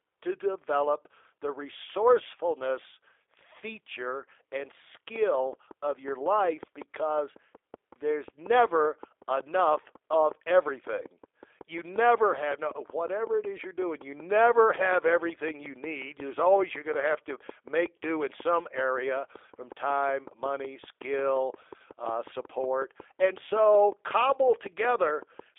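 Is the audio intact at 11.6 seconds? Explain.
No. A train of clicks runs from 5.16 to 25.40 s, starting after "the resourcefulness feature and". Regular ticks come 5.4 times per second, about 5 dB above the speech, likely from interference. The G.729 codec also applies throughout. At 8 kbit/s, it rebuilds speech from a filter and sparse pulses, cutting everything above 3.7 kHz. The result sounds rough and synthetic.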